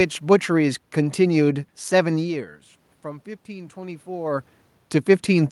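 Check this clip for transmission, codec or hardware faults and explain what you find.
One fault appears in this speech: automatic gain rising from 2.21 to 4.52 s. The input level falls by about 16 dB, around where the talker moves back at roughly 2 s, and the gain control then slowly adds about 3 dB. Voice and room noise swell together. On the waveform the envelope climbs gradually, and on the spectrogram the noise floor brightens along with the voice.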